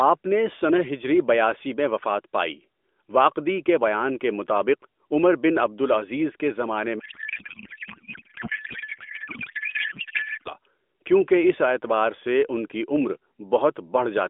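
From 7.00 to 10.53 s, a codec payload misread occurs: the sender packs AMR frames in octet-aligned form while the receiver unpacks them as bandwidth-efficient, so every field lands in the wrong bit position. The decoder still accepts the frames and synthesizes from scrambled parameters, so the speech gives way to garbled noise and warble that barely tracks it. Either side of the fault, the narrowband mobile codec sounds lightly coloured, which fits AMR-NB at about 12.2 kbps.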